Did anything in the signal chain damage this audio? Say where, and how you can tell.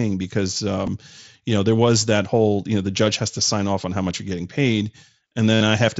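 Yes. The damage is in the Bluetooth link between headset and phone: concealed Bluetooth headset packet loss. At 0.87 s a single short gap of about 7.5 ms is patched almost invisibly. From 5.54 to 5.61 s a 67.5 ms run, which fits roughly nine consecutive lost packets, comes through as a buzzy, steady-level tone with a slight warble as real audio resumes. The receiver is repeating the best-matching slice of recent waveform to fill each missing packet, over the 8 kHz-limited mSBC path.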